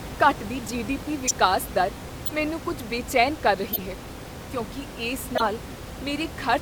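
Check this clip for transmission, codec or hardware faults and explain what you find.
Corrupt frames were decoded and played at four points in this speech clip. There is no other fault.

Corrupt frame decoded, at 1.26 to 1.32 s, 2.26 to 2.31 s, 3.72 to 3.79 s and 5.35 to 5.49 s. Bits in the compressed stream were flipped. The decoder played the damaged frames anyway. Misread gains and codes put energy at the wrong frequencies.

Each event is a short chirp, squeak, blip or burst of noise. The first comes just before "ਦਰ ਮੈਨੂੰ ਕੁੱਝ ਬੇਚੈਨ". The second comes just before "ਮੈਨੂੰ ਕੁੱਝ ਬੇਚੈਨ ਕਰ". The third falls between "ਮੈਨੂੰ ਕੁੱਝ ਬੇਚੈਨ ਕਰ" and "ਹੈ ਕਿਉਂਕਿ ਇਸ". The bursts peak at roughly −10 dBFS, and the second is a little softer.

The second burst spans a couple of frames. The first and third span a few. The last one is the longest and spans several frames. About 19 ms of audio is skipped there.

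The room noise sits about 12 dB below the speech. It is part of the recording, not a system fault.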